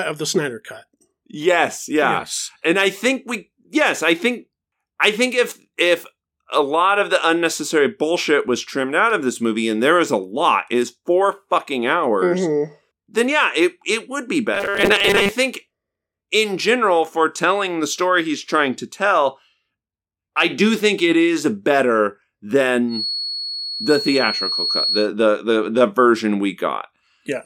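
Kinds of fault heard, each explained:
Robotic sound from repeated short buffers: From 14.55 to 15.32 s the speech turns into a rigid metallic buzz at 200 Hz, likely from a 5 ms chunk being replayed while most real audio was skipped. Spectrograms show evenly spaced 200 Hz harmonic lines; the waveform shows identical repeating cycles.
Feedback whistle: From 22.87 to 25.09 s a thin, steady tone at 4.4 kHz sits only a few decibels below the speech, likely from a loudspeaker-to-microphone loop held at the edge of feedback. A spectrogram shows one flat horizontal line, gently wavering in brightness.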